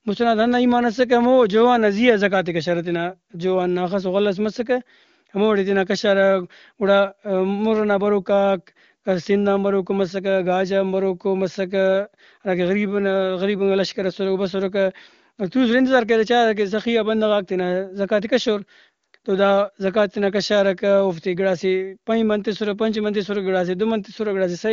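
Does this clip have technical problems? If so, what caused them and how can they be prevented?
No, there are no technical problems to point to in this speech clip. It has passed through an AMR wideband (HD Voice) codec whose sound fits the top 23.85 kbit/s mode, leaving at most faint coding traces and nothing above about 7.2 kHz.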